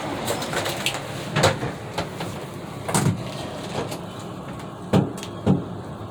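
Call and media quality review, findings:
Call and media quality review findings: none for this audio.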